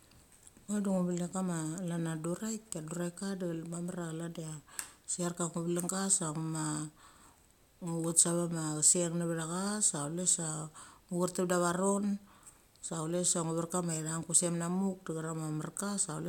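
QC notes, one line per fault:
No technical faults turn up anywhere in the speech signal.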